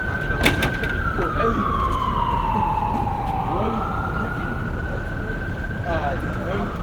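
At 4.65 s a call bitrate drop sets in and lasts to the end: the audio turns coarser and watery, which fits the encoder falling from about 32 to 16 kbps. A spectrogram would show upper bands thinning out, with blurrier detail.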